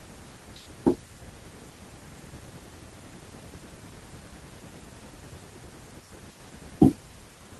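Nothing stood out as a technical problem on listening to this speech recording.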